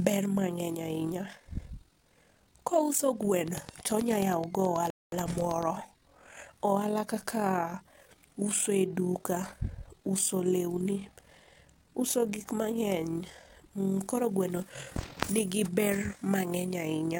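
Overlap-add ripple runs through the whole speech clip. The audio was split into windowed frames and rejoined with an overlap that does not sum to a steady gain, so the level swells and dips by about 6 dB around forty times a second. The result is a rough, buzzy tremolo.

A train of clicks runs from 3.48 to 5.64 s. About twenty near-identical pulses arrive at an even 9.34 per second, peaking roughly 10 dB above the speech. They sound like steady ticking laid over the sound. The likely cause is interference from nearby equipment or a faulty connection or power supply.

A rebuffering stall falls inside that stretch, from 4.90 to 5.12 s. The player ran out of downloaded audio and halted. The speech drops to silence, then resumes exactly where it stopped, with nothing lost but 0.22 s added to the timeline.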